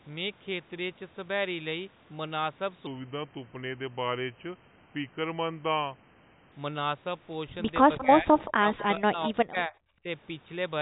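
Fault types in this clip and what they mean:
Section at the wrong speed: likely a playback clock mismatch slowed 2.87 to 6.52 s to 0.84 times speed, so the speech drops about three semitones and drags.
Echo leak: the far end's echo canceller likely let its loudspeaker pickup through, returning faint copies delayed 179 ms, about 20 to 25 dB down, near 7.98, 8.39 and 8.80 s.
Speech suppressed in double talk: with both sides talking, the echo canceller likely turned the talker down too, so speech dips and breaks between 7.98 and 9.74 s, deepest by about 35 dB.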